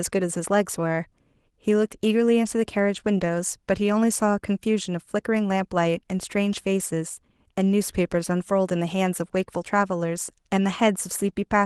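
Right from the start there's clock drift between sender and receiver: the sender's clock runs about 2% slow, so the receiver's jitter buffer keeps draining and has to be topped up. Over the clip it pads in a fifth of a second or so, and the speech plays at about 98% speed.

That padding shows up as repeated timing corrections from 0.38 s to 11.59 s. The receiver keeps repeating short slivers of audio at uneven intervals, always stretching and never trimming. You hear it as faint hiccups and a slightly unsteady, dragging tempo under the Opus call coding, which tops out around 12 kHz.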